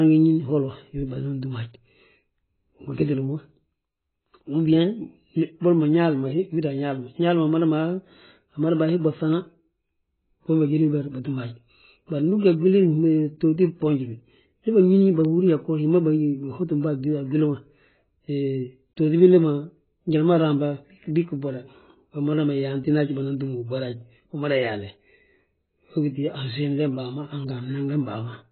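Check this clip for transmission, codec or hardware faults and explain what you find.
One codec fault runs through the whole recording. Throughout, the speech is dull and smeared with nothing above 4.5 kHz, heavy AAC compression likely, fitting about 16 kbps: the warbly sibilants distinguish it from a plain low-pass filter.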